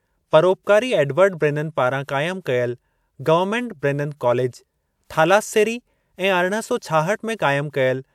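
No technical faults are audible anywhere in the recording.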